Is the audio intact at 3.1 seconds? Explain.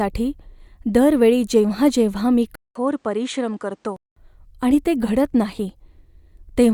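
No. From 2.55 to 4.16 s, between "वेळी जेव्हा जेव्हा मी" and "आणि ते घडत नाही", the input likely switched to a poorer device. A 200 ms gap opens, then duller, quieter speech with nothing above 9.9 kHz. The spectrogram shows a hard ceiling and a faint new noise floor.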